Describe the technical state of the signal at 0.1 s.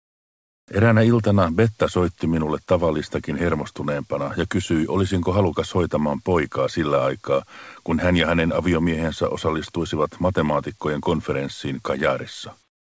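At 0.1 s the signal is inside a stretch of comfort noise in place of the background, running from 0.0 to 0.68 s. The real ambience is replaced by a steady, featureless hiss about 26 dB quieter, likely because the sender paused transmission while its voice detector heard no speech and the receiver synthesized filler. Unlike a dropout or a noise gate, the floor never goes silent. It stays smooth and constant, with no texture, and is capped at 8 kHz by the G.722 call path.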